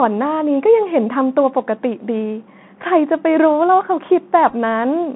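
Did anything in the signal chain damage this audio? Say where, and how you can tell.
Yes. The codec stage: the whole clip carries the sound of the Bluetooth CVSD headset codec. The band runs only from about 150 Hz to 3.5 kHz, and the damage is plainly audible. Sibilants come out scratchy, loud bright passages break up where the one-bit delta modulator's adaptive step can't keep pace, and a fine granular hiss sits under the speech. That combination points to a 64 kbps CVSD headset link.

The wireless link between headset and phone: there are Bluetooth headset packet repeats between 4.50 and 4.54 s. Over roughly 37.5 ms, about 18.8 ms of audio is replaced by replayed data, in short runs of a few milliseconds. That points to several lost packets. The decoder re-decodes the previous packet's bits, so each run repeats a 3.75 ms slice and produces a brief buzzy, roughly 267 Hz texture with small ticks at the seams.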